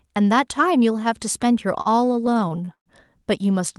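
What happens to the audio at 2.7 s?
At 2.7 s the audio is inside a run of repeated stalls (stutter) from 1.81 to 2.88 s. The jitter buffer kept running dry, and twelve times the receiver stretched the last sound, up to 121 ms. Unlike packet loss, nothing is skipped; the speech just drags.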